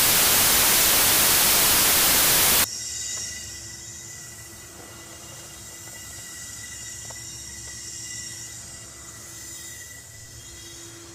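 Samples built from the wrong bytes fill the opening, from 0.0 to 2.64 s. Each sample's bytes are assembled out of order or misaligned, so the rapidly changing low bits dominate, turning the sound into loud, harsh broadband noise, close to white on loud passages.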